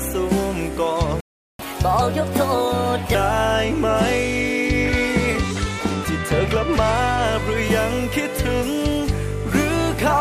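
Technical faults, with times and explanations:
1.20–1.59 s, playback stall: the sound cuts out for about 0.39 s, then resumes where it stopped, likely because the player ran out of buffered data.
1.59–3.15 s, catch-up at higher speed: the backlog is resampled to play 1.25 times faster, raising pitch by about four semitones until timing recovers and normal speed returns.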